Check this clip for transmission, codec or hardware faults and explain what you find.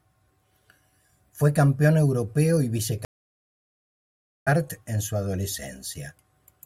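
One transmission fault is present: a stream reconnect in this speech clip. After "campeón europeo y", the audio drops to silence at 3.05 s and stays dead for about 1.4 s, until 4.48 s. The connection broke. The player then reconnected and started a fresh decoder mid-stream. Playback resumes at "en su", roughly a second further on, so that stretch of the stream is simply missing. The restart comes back with the first instant faded in.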